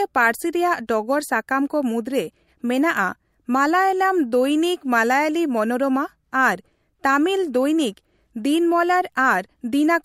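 Pre-echo at 0.87 s: quantisation noise spread across a 26 ms transform block, never switched to short blocks, raises hiss about 16 dB ahead of the attack, smearing it.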